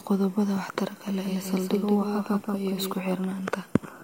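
A second, slower path has likely captured the same speech and mixed it back in, producing a doubled audio track from 1.07 s to 2.93 s. A full-band copy trails the original by roughly a fifth of a second, sitting around 5 dB quieter, so every syllable is followed by a dry, distinct repeat with no room colour or decay. The copy cuts in abruptly at 1.07 s and drops out just as suddenly at 2.93 s.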